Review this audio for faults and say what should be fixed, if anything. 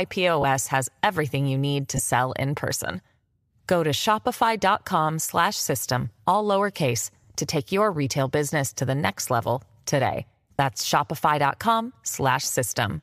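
Lost LE Audio frames at 0.42–0.44 s (just before "has everything you need"), 1.97–2.00 s (between "everything you need to" and "in person"), 5.28 s, 7.24 s and 10.57–10.59 s (after "the next level today"). Each gap lasts about 10 to 30 ms, which fits one to three 10 ms frames going missing. The decoder fills each gap by repeating the last spectrum with scrambled phase, so the sound briefly turns into a short noisy smear. The likely cause is dropped packets on the Bluetooth LC3 link. Preventing this means strengthening that link by reducing distance and 2.4 GHz interference, or by enabling retransmissions with more buffering so late packets still arrive in time.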